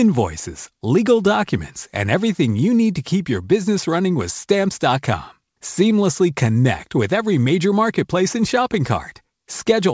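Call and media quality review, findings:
Nothing stood out on listening to this speech over the WebRTC call path, where the top end stops at 8 kHz, which fits wideband G.722 coding.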